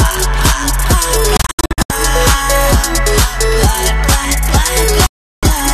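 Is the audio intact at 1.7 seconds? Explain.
No. A digital broadcast dropout runs from 1.37 to 1.90 s: failed frames mute the receiver, leaving short silent holes, the longest 72 ms, with 3 ms fades.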